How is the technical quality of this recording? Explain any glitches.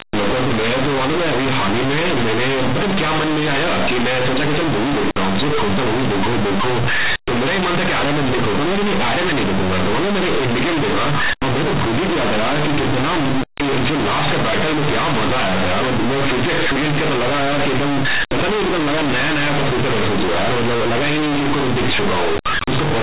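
The quality is poor: the speech is buried in harsh distortion for the whole 23 seconds. The telephone band underneath is intact, with nothing above 4 kHz, which fits 8 kHz G.711 sampling.

Throughout, this is companded audio read as linear. Mu-law bytes are being played as plain 8-bit samples without expansion, so each sign change flips the output across roughly half its range and quiet passages come out as loud as peaks. It sounds like a loud, buzzy roar with heavy noise in the pauses. The waveform looks like a dense, uniform block, and the spectrogram shows broadband energy smeared up to 4 kHz, even between phrases.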